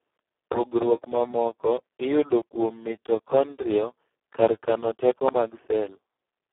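Throughout, the speech carries heavy Speex codec damage. This CELP coder, starved of excitation bits in a way that fits a setting near 4 kbps, leaves it hoarse and noisy. A spectrogram shows energy confined to 300 Hz to 3.4 kHz, blank above 3.8 kHz.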